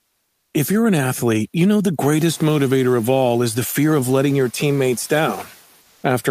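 A speech recording with comfort noise in place of the background from 5.81 to 6.03 s, likely because the sender's discontinuous transmission stopped sending audio during the pause. For those 220 ms the receiver fills in synthetic noise, so the real background, which sits about 37 dB below the loudest speech, gives way to a flat, featureless hiss about 2 dB quieter. The room noise, which rises by about 14 dB near 2 s to sit about 25 dB below the speech, is part of the recording.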